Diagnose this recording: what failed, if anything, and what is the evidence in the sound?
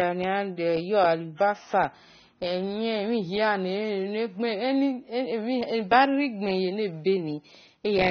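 Throughout, the speech sounds dull, with plainly audible codec damage and nothing above 6.3 kHz. This is a codec-stage fault, likely AAC compression: short of bits, AAC-LC quantises its frequency lines coarsely and lowers its cut-off, which fits a rate near 24 kbps.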